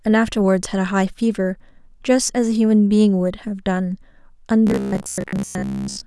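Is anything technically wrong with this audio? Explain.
Yes. From 4.67 s to the end at 6.06 s, the speech turns into robotic sound from repeated short buffers. The voice becomes a rigid, metallic buzz pitched at 66.9 Hz. It still loosely tracks the words. The likely cause is new audio arriving too slowly. The playback fills each gap by looping the last block of roughly 15 ms, which sets that fixed pitch. Most of the real audio in this stretch, around two thirds or more, is lost to the repeats.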